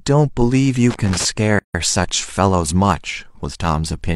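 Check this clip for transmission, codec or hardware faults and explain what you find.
Two faults stand out in this speech clip: a burst of connector crackle and a short dropout where separately encoded pieces meet.

From 0.90 to 1.25 s there is loose connector crackle: a worn or dirty contact repeatedly making and breaking, chopping the signal and adding pops from any DC on the line. It sounds like irregular scratching; the waveform shows jagged spikes, the spectrogram scattered broadband vertical streaks.

From 1.59 to 1.74 s a gap at a join of encoded pieces opens for about 154 ms. Each piece kept its encoder's leading delay and end padding, leaving silence in continuous speech. The waveform drops to a flat line with slightly smeared edges; the spectrogram shows a clean vertical blank band.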